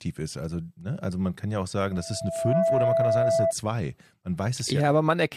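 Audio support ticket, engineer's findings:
Loudspeaker feedback squeal 1.91–3.53 s, after "kann ja auch sagen": 663 Hz tone swells over roughly 0.7 s to about 5 dB above speech. Mic hearing its own speaker, loop gain above one.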